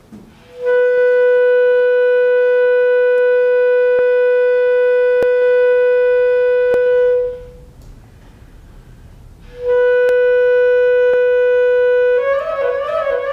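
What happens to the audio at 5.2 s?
At 5.23 s the sound jumps abruptly forward, with no silence in between; roughly 20 ms of audio is simply missing and the two sides are butted together. This is likely a dropped buffer (overrun), where the samples were overwritten by the hardware before the program collected them.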